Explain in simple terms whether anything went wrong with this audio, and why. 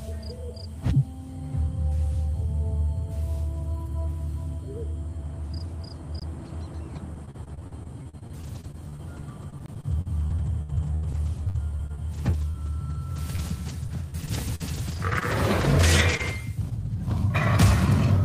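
Two things went wrong.

First, there are two blocks of digital silence, at 6.20 s and 9.66 s. Each time the sound drops out for just over 20 ms, then snaps back. There is no fade. The result is a quick tick or tiny hole. These cut-outs usually happen when the program fails to fill its output buffer in time. The second one fits a 1024-sample buffer.

Second, from 6.95 s to 16.87 s there is repeated packet loss, which gives a robotic sound. Small pieces of the audio kept going missing, dozens of them, the longest about 80 ms. Each hole was patched by stretching out the last bit of sound. About a second in total was rebuilt this way, roughly an eighth of that stretch. The holes come close together, so the sound turns choppy.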